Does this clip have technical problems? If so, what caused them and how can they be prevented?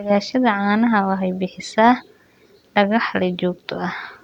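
No, there are no technical faults to report in this speech recording, so nothing needs preventing.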